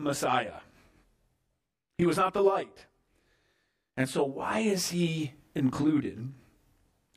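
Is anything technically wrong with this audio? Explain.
Yes. Throughout the speech, the sound has a rough, slightly doubled quality, with the same coloration from start to finish. This is channel delay, or comb filtering. One channel arrives roughly 20 ms after the other, and summing them to mono cancels the shared content at regularly spaced frequencies. With a delay that long, the notches begin down around 20 Hz and repeat closely all the way up the spectrum.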